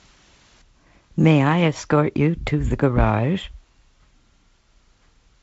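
Nothing is technically wrong with this speech clip, which comes through G.722 wideband telephone coding at 56 kbit/s with nothing above 7.7 kHz.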